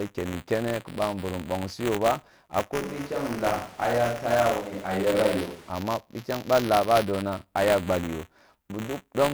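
From the start and running through the whole clip there is buffer tearing: a robotic buzz at 200 Hz, tied to the speech and gone in pauses, unlike steady hum. Writer and hardware reader have slipped, so each 5 ms period carries a small sliver of audio from roughly 20 ms earlier.

From 2.82 s to 5.70 s, just before "bitayang ba laa ba", the speech turns roomy and hollow and thin in the bass, with background noise at roughly 25 dB below it. The level barely changes. The abrupt switch in and out sets it apart from added reverb. It is likely a switch to a distant microphone after the close one dropped.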